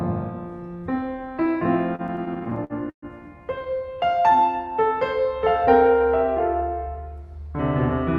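From 1.95 to 3.05 s the music hits repeated stalls, a stutter: packets kept arriving late, so the receiver held the last sound through eleven gaps, the longest about 127 ms. Then at 3.58 to 3.63 s there's a short stall from a late packet, a sound held about 19 ms too long, with a slight buzz or dip before it carries on. From 3.89 to 4.53 s a jitter buffer slow-down builds reserve by repeating tiny slices, so the music runs at 93% speed, same pitch, slightly drawn out.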